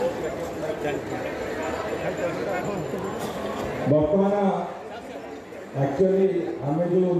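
At 2.60 s there is a brief blip from damaged data in a compressed stream. Part of the encoded audio was corrupted there. The decoder misread the frames there and lost sync until the next valid header. The result is a short glitch lasting about 13 ms.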